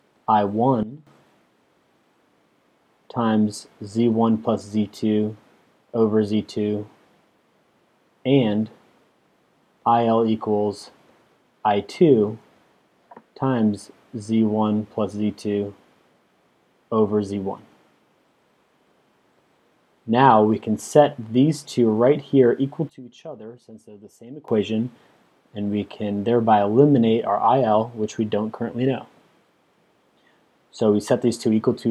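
The audio has two sudden gain jumps. From 0.83 to 1.07 s the level falls by about 15 dB, and from 22.89 to 24.48 s by about 20 dB. In both cases the sound and its background noise drop together on a single sample and recover just as abruptly, with no fade at either edge. That points to a gain setting or bit shift likely being applied without a ramp.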